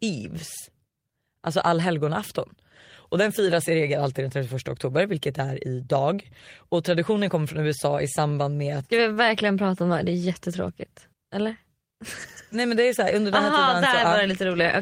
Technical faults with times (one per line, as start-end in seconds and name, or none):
9.13-9.19 short stall from a late packet
13.49-14.07 jitter buffer speed-up